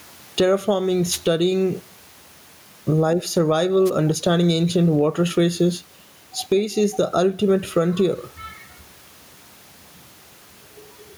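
Right through the clip there's gain pumping. The room noise sits about 41 dB below the speech, and the gain gets shoved down by something like 10 dB whenever the speech gets loud, so everything feels squashed. That's likely a fast limiter reacting to input gain set far too high.

From 1.10 to 1.19 s there's a wireless microphone noise hit, a quick swish of static over the speech. A shorter one follows from 3.85 to 3.90 s, just before "understanding ancient water traces". Both happen when the analogue FM link fades as reflections cancel and receiver noise rises over the signal.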